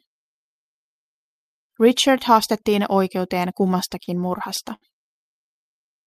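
From 3.67 to 4.84 s the speech shows repeated stalls (stutter). Five times, packets arrived too late for the jitter buffer, and the receiver stretched the last sound, about 131 ms in total, longest 66 ms. Unlike packet loss, nothing is skipped: the speech drags and hiccups rather than jumping.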